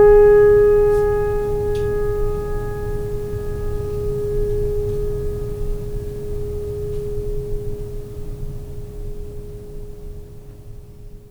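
No technical faults are audible.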